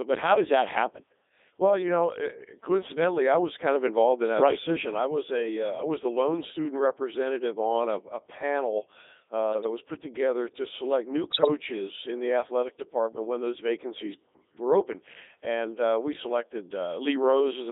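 Speech passed through the Codec 2 vocoder at 3.2 kbit/s throughout, confined to roughly 250 Hz to 3.7 kHz. The voice is rebuilt from sine waves driven by pitch, voicing and envelope data, so it sounds robotic and buzzy. Unlike ordinary low-bitrate codec smearing, the original waveform is gone, and the damage here is heavy. From 11.32 to 11.48 s, bit errors on digital voice radio make the synthetic voice lurch in pitch, level and tone into warbling gibberish. The burst fits about six corrupted frames at roughly one bit in twenty. It is a sudden garbled jump, not a dropout or silence.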